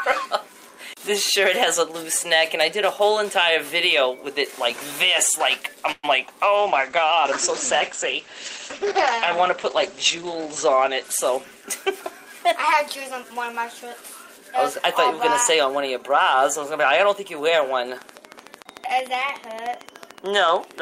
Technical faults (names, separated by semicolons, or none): call audio freeze; short concealed packet loss; call bitrate drop; jitter buffer speed-up; train of clicks